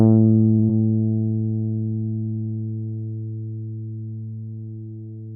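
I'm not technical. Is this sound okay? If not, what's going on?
No. At 0.59 to 0.65 s there is a short stall from a late packet. One chunk of audio arrived late, so the receiver held the last bit of sound for about 37 ms until it showed up. Nothing is lost, but that moment lingers slightly too long and the rest runs 37 ms later.

Right after, from 0.65 to 0.71 s, there is a short concealed packet loss. About 40 ms of audio never arrived in time, and the receiver filled the gap by extending the sound before it. You may hear a quick smear or wobble where a tiny piece is missing.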